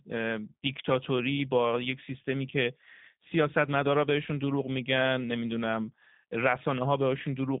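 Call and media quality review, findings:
G.729 codec coding, whole clip. Speech band-limited to roughly 150 Hz to 3.7 kHz, nothing above 3.8 kHz; plainly rough, buzzy, slightly synthetic timbre. Speech rebuilt from a vocal tract filter, pitch predictor and sparse pulses per 10 ms frame, which fits an 8 kbit/s G.729A path. Unlike a plain narrowband filter, the tone itself is degraded, not just dulled.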